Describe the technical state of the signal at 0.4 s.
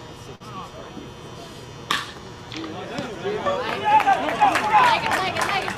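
A short stall from a late packet runs from 0.35 to 0.42 s. A packet arrived late, the jitter buffer emptied, and the receiver stretched the last sound for about 50 ms before resuming where it stopped. Nothing is lost, but that sound holds too long, with a faint buzz or dip.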